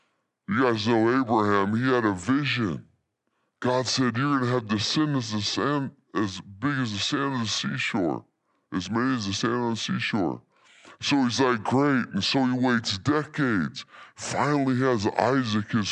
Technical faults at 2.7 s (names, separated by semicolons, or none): wrong sample rate